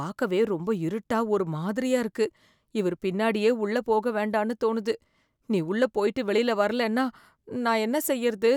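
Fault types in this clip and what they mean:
No fault types are present in this clip.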